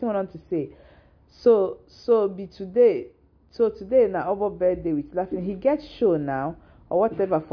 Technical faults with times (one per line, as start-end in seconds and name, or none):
none